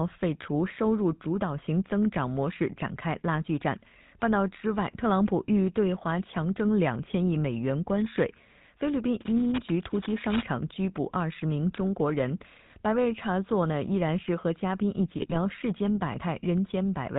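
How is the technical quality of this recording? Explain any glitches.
The recording has poor technical quality. It suffers two codec faults.

The GSM full-rate codec colours the speech for the whole clip. Everything above 4 kHz is gone. The speech sounds buzzy and gravelly. The codec models the vocal tract and excites it with sparse, regular pulses, and that fits the 13 kbps full-rate coder.

GSM bit errors strike from 15.22 to 15.37 s. The speech breaks into squawks, pops and gargling. Corrupted filter, pitch or gain values distort the spectrum and the level frame by frame. The span points to several damaged frames in a row.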